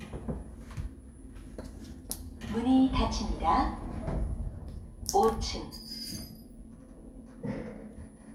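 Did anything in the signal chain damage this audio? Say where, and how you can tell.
No, nothing stood out on listening to this recording of sounds that would point to damage anywhere in the signal chain.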